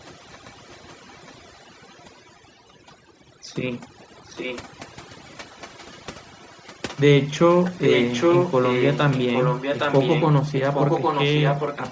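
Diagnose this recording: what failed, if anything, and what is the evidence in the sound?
Across the whole clip the background sits at near silence, broken only by twinkling, metallic specks. That points to overdone noise removal in the call processing chain: the suppressor was set so hard that any frequency band close to its noise estimate was pulled far down or switched off, taking the quieter parts of the speech along with the hiss and leaving isolated bands flickering on and off.

A delayed copy of the voice trails the original by about 0.81 s throughout, growing stronger as the clip goes on. From 0.00 to 2.96 s it is barely there, from 3.73 to 7.02 s it is faint but audible, and from 7.29 to 10.27 s and again from 10.49 s to the end it comes in almost as loud as the direct speech. The likely cause is echo leak: the far end was on a loudspeaker, its echo canceller failed to remove what its microphone picked up, and that residue was sent back. 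Nothing is heard above 8 kHz, which fits the call path's band limit.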